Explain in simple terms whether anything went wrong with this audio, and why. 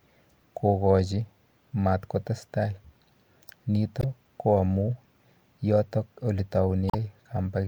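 Two brief glitches break into the speech, at 3.99 to 4.04 s and 6.87 to 6.95 s. This is damaged data in a compressed stream: part of the file was corrupted, so the player misread those bits and had to find its place again.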